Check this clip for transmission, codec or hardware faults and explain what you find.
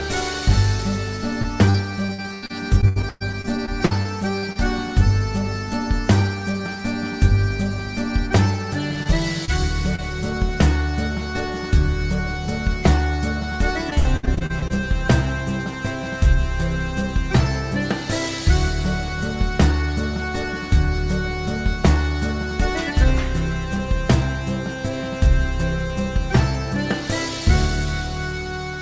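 Yes, there's packet loss in two forms, heard over a call path that carries nothing above 8 kHz.

Repeated packet loss (robotic sound), 1.42 to 4.57 s and 13.90 to 14.71 s: lost packets keep getting patched by stretching the last sound. The result is choppy and robotic, with gaps up to 115 ms.

Short concealed packet loss, 9.03 to 9.07 s, 9.45 to 9.50 s and 9.96 to 10.00 s: about 20 ms goes missing each time. Concealment fills the hole, leaving a quick smear or wobble.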